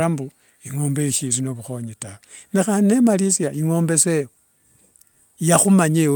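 Speech recording with no audible technical faults.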